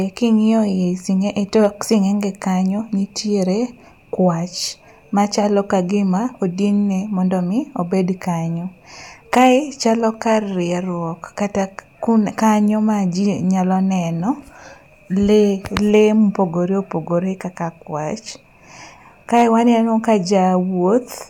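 A harsh, flattened crackle hits the loud peaks from 15.77 to 16.01 s, just before "mopogore opogore kaka kwach", and a briefer one from 19.37 to 19.43 s before "waneno ka". This is hard clipping: the signal overdrove a stage by about 8 dB, then about 3 dB, squaring off the peaks.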